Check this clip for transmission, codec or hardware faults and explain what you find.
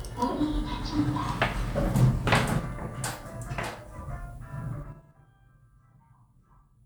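One fault. Zipper noise from 4.74 to 5.11 s. The level falls about 20 dB in unsmoothed 5 dB steps, roughly ten per second. Each step clicks, giving an audible zipping.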